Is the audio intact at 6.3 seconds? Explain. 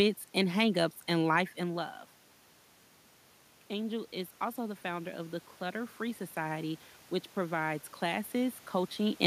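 No. From 3.7 to 6.88 s, just before "which provides", automatic gain rising is under way. The level reaching the microphone fell by about 11 dB, and the gain control responded by slowly raising its amplification by about 5 dB rather than correcting at once. At 6.3 s that ramp is still running, so the speech and the room noise behind it swell upward together, a gradual lift in level and background noise over roughly three seconds.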